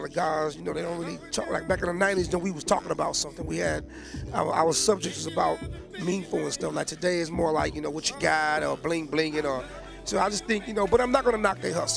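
No dropouts, distortion, noise bursts or timing glitches turn up anywhere in the audio.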